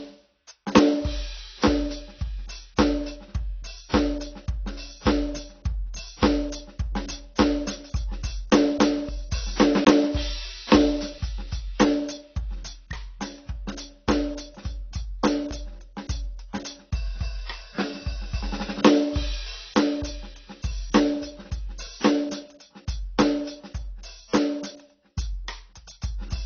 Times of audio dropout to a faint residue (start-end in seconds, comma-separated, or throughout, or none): none